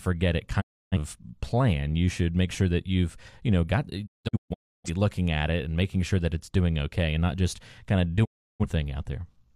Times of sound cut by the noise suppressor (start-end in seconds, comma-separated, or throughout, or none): none